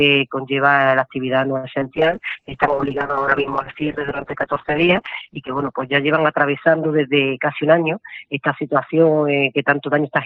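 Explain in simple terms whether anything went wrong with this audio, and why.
Four things went wrong, all from the network carrying the call.

At 1.57 to 1.66 s there is a short stall from a late packet. A piece of audio arrived late, so the receiver held the last sound for about 60 ms until it came. Nothing is lost, but that moment drags slightly.

At 1.80 to 1.83 s there is a short concealed packet loss. About 20 ms of audio never arrived in time. The receiver filled the gap by extending the sound around it, which leaves a brief smear or wobble.

From 1.96 s to the end there is a call bitrate drop. The connection looked congested, so the encoder switched to a much cheaper, coarser setting. The sound turns rougher and duller because the top of the range falls from 20 kHz to about 6 kHz.

From 6.85 to 7.63 s there is a jitter buffer speed-up. Too much audio had built up in the receiver's waiting area. 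To catch up, it cut out tiny slices adding up to around a twentieth of a second. The audio runs about 6% faster there at the same pitch.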